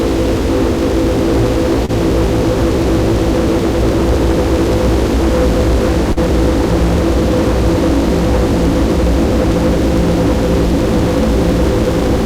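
Short concealed packet loss occurs at 1.85 to 1.90 s and again at 6.12 to 6.18 s. Each time, a stretch of audio failed to reach the decoder in time, so the receiver extended the preceding sound to cover the gap and then blended back into the real signal. The first patch covers about 31 ms, and the second about 39 ms. Both are heard as a brief smear or wobble in the sound.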